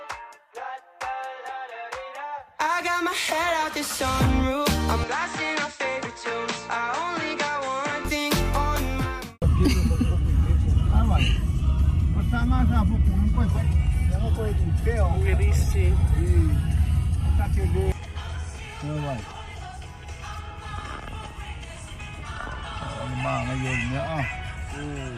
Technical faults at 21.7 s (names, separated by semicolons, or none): none